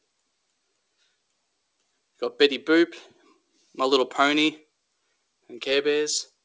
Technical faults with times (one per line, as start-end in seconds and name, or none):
none